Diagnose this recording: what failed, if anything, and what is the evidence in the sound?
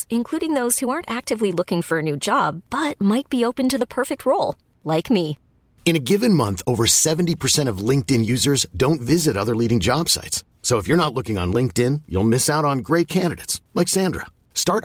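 Nothing failed in this recording, and the sound gives no evidence of a fault at any stage.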